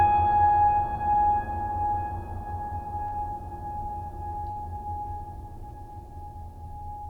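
Short concealed packet loss hits this music clip twice, at 3.07 to 3.14 s and 4.51 to 4.58 s. Each time about 40 ms of audio arrives too late and is patched by extending the preceding sound, leaving a brief smear or wobble.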